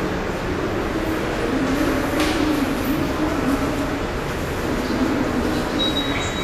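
Likely Vorbis compression at a low bitrate, around 36 kbps, throughout: nothing survives above 14.2 kHz, and coarse treble quantisation leaves the sound plainly hissy, grainy and blurred.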